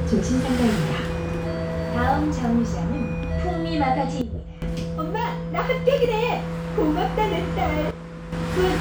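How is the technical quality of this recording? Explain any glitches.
The recording has two abrupt level drops. At 4.21 to 4.62 s and again at 7.91 to 8.32 s, a sudden gain jump occurs, likely a digital gain setting applied instantly without a ramp. The sound and its background noise fall together, by about 12 dB and then about 9 dB, and snap back afterward.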